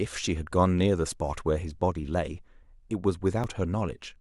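Overlap between stream segments at 3.44 s in this speech recording: overlapping segment time stamps, with roughly 4-second segments, made the player discard a few milliseconds, so the waveform jumps with a tiny skip.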